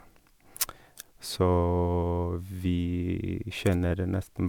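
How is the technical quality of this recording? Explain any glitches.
The recording has one fault, present throughout: generation loss. The speech has likely passed through an MP3 encoder several times, each pass decoding and re-encoding on a shifted frame grid so fresh quantisation noise and spectral gaps pile on top of the last. The damage sounds like repeated trips at a rate around 128 kbit/s, with content stopping near 20.9 kHz. The result is a swirly, hollow coloration and softened consonant attacks, more smeared than one such encode would leave.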